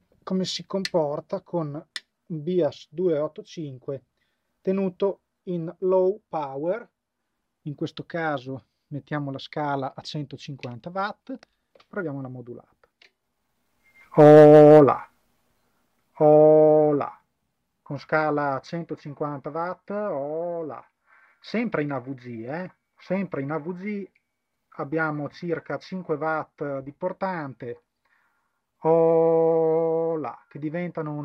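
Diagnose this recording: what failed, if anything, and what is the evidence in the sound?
Nothing failed in this recording, and there is no evidence in the sound of any fault.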